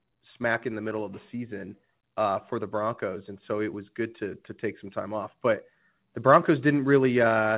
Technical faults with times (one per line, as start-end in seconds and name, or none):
none